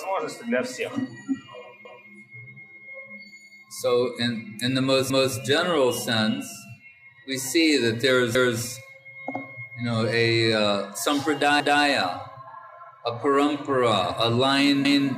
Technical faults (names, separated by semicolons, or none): overlapping chunks